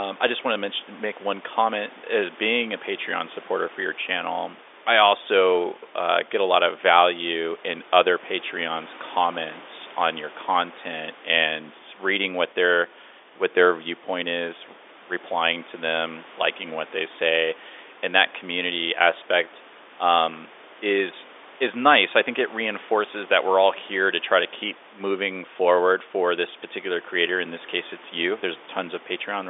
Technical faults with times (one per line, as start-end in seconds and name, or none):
none